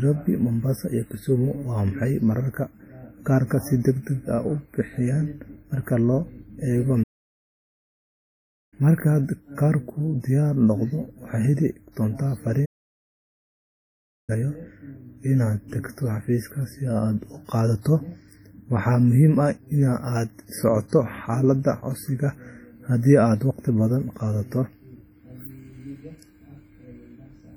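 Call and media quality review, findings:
WMA compression, throughout: ringing, washy speech with hiss that swells and sinks with the signal. Likely a WMA transform encoder at heavy damage, consistent with roughly 32 kbps; long blocks smear quantisation noise over tens of milliseconds and zero weak spectral lines.

Playback stall, 7.03–8.74 s: speech cuts out mid-flow for about 1.69 s, then resumes. Likely player buffer underrun or blocked output thread; output silent until data arrived.

Playback stall, 12.65–14.30 s: same symptom, about 1.63 s silent gap. Likely the same starvation of the playback path; audio continues once the player recovers.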